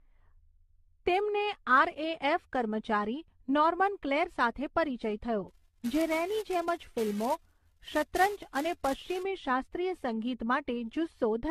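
Generation loss runs through the whole speech clip: the sound is swirly, smeared and hollow, with blurred attacks and nothing above 14.1 kHz, most likely from repeated decoding and re-encoding, about ten passes, through 64 kbit/s AAC-LC, each pass stacking fresh quantisation noise and spectral holes on a shifted frame grid. A filter restarted on every block appears from 5.48 to 9.23 s as a 345 Hz buzz that rises and falls with the speech level, which fits a filter losing its state every 128-sample block and starting each one with a small transient.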